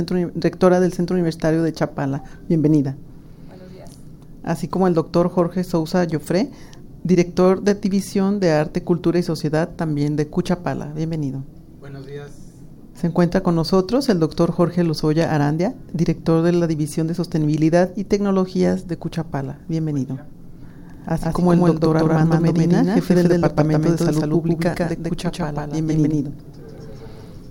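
From 20.94 s to the end, a doubled audio track appears, most likely because the signal is captured a second time through a slower path. A dry, full-band copy at roughly equal level trails by around 150 ms. It cuts in abruptly and sounds like a flat echo with no decay.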